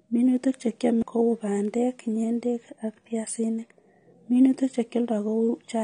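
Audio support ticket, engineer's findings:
AAC compression, whole clip: dull, smeared speech, audible warble and fizz on sibilants, no content above 9.8 kHz. Likely AAC-LC encoder at low bitrate, consistent with about 32 kbps, lowering cut-off and coarsely quantising frequency lines per frame.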